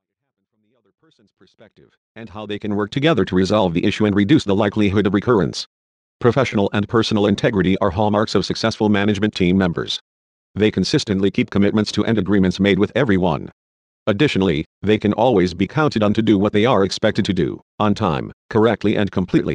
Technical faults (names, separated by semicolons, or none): none